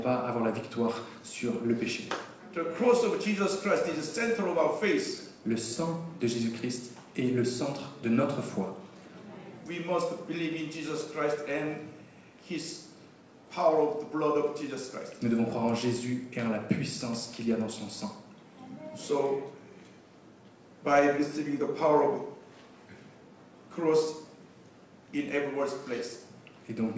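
No technical faults can be heard anywhere in the audio. It has passed through a call path whose codec leaves nothing above 8 kHz, which fits wideband G.722 at 64 kbps.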